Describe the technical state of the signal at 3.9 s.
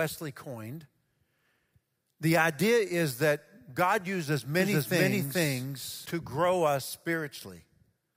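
At 3.9 s the speech signal is intact, with no audible technical fault at that point.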